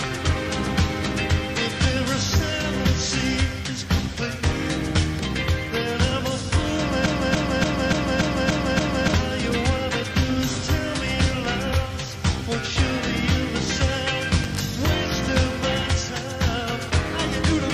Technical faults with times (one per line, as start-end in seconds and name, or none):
7.06-9.14 broken-record loop